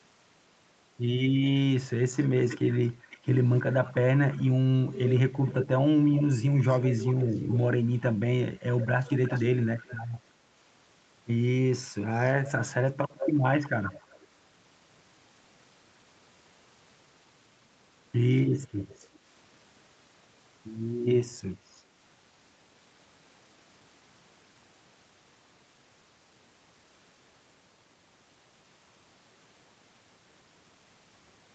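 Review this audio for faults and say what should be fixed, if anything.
Echo leak shows up five times: 2.14–8.03 s, 8.75–9.98 s, 12.24–14.27 s, 18.63–19.07 s and 21.66–21.83 s. A delayed copy of the speech trails by 327 to 388 ms, around 10 dB down at its loudest and very faint in the last short burst. It's likely a speakerphone on the other end whose echo canceller isn't removing everything its mic picks up. Putting that side on a headset should stop it.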